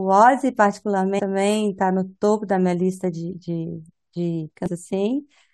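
Damaged data in a compressed stream hits the speech twice, at 1.18–1.20 s and 4.66–4.68 s. Corrupted bytes make the decoder misread frames and lose sync until it finds the next valid header, so each spot is a brief glitch lasting about 20 ms.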